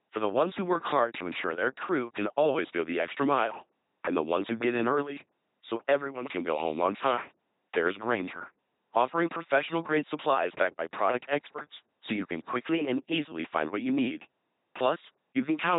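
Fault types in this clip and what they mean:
LPC-10 vocoder, throughout: the speech is rebuilt rather than carried, as a short all-pole filter standing in for the vocal tract and driven at each instant by either a buzzing pulse train or plain noise, with nothing in between. That gives the heavy, mechanical robot quality here, with buzz and hiss wherever the voiced or unvoiced choice is wrong. Nothing survives above about 3.9 kHz, which fits a 2.4 kbit/s coder.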